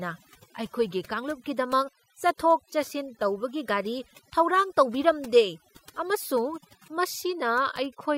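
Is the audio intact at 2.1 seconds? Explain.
No, overdone noise removal runs throughout, so an over-aggressive noise reducer mutes bands near its noise estimate, leaving a background that drops and breaks up into twinkling, warbling specks.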